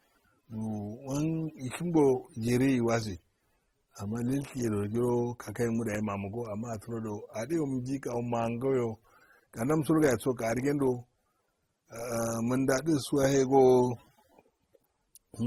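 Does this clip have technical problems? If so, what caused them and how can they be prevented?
Yes. The speech has layered artefacts throughout, likely from transcoding between lossy codecs, with AAC artefacts and Opus's own heard together, which fits roughly 32 kbit/s at each stage. Nothing shows above about 20.1 kHz. To prevent it, encode once from a lossless source.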